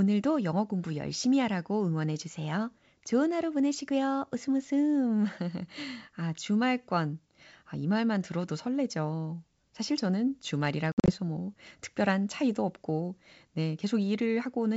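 Between 10.92 and 11.11 s, after "들어도 설레죠 사실 저는" and before "뭐 특별한 차이도 없고", the speech breaks into hard-edged silent gaps totalling 120 ms, scattered across about 160 ms, with the longest single gap lasting 60 ms. This is packet loss on an ADPCM call: several packets went missing and were filled with silence. Each dropout also disturbs the decoder's adaptive predictor and step size, leaving them out of step with the sender's. The wideband G.722 coding itself carries the speech cleanly apart from this stretch.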